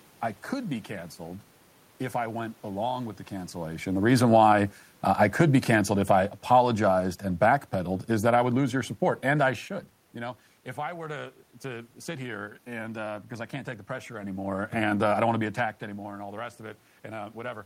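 Automatic gain falling from 5.35 to 7.23 s: just after "reason why uh I", the gain control judges the input too loud or its background noise too strong and eases its gain down by about 3 dB. The voice and its background room noise sink together, settling lower by "and backpedaled is that".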